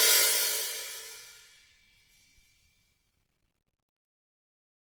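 Generation loss runs throughout the music, its likely cause repeated lossy coding, around seven passes of something like Opus at 48 kbit/s. Each pass requantises on a shifted frame grid, so the sound turns swirly and hollow, with attacks smeared and nothing above 20.1 kHz.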